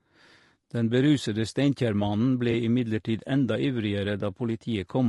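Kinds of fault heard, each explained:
Low-delay AAC compression: The speech sounds rough and grainy throughout, with noise filling the gaps between harmonics and a thin, synthetic top band. This is likely low-delay AAC of the video-call kind, whose short frames blur pitch detail at around 32 kbps.
AAC frame loss with concealment: At 2.51 s a brief smeared, noisy patch interrupts the speech. About 20 ms of audio, which fits one lost frame, was replaced by the decoder guessing from the last good spectrum, so the sound blurs rather than drops out.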